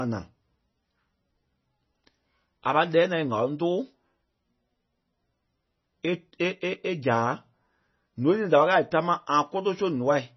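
From start to finish the speech carries heavy MP3 compression damage. The top end stops abruptly at about 5.9 kHz, a hard low-pass that points to a very low bitrate, around 24 kbps. With so few bits, weak frequency lines are zeroed and flicker between frames, giving a watery, swirling texture, metallic chirps on s sounds, and smeared consonant onsets. The likely cause is an aggressive MP3 encode at that rate.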